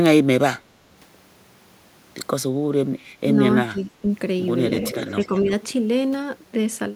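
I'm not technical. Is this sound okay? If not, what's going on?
No, there are a few problems, all from the echo canceller, the part of a call system that stops the loudspeaker's sound from being sent back through the microphone.

From 0.82 to 0.93 s, you'll hear the background gated by the echo canceller. The room sound briefly dips, clearly but not all the way to silence, for about a tenth of a second, then comes right back. The canceller clamped down on the microphone while the loudspeaker was playing and then eased off.

At 3.2 s, again from 3.54 to 4.07 s, and once more from 5.14 to 5.48 s, the speech sags and turns patchy. At 3.2 s it's just a tiny blip, and the stretch around 3.5 to 4 s gets noticeably quieter in places. The last one is only a mild dip. This is likely speech suppressed in double talk: both sides spoke at once, the canceller couldn't tell the local talker from the loudspeaker's echo, and it turned everything down.

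From 4.81 to 5.4 s there's an echo leak. A faint, delayed copy of the speech trails about a third of a second behind, fairly quiet compared with the main voice. That's likely the far end playing the call on a speaker, with its canceller not removing everything its microphone picked up, so some of it came back down the line. It overlaps the last dip.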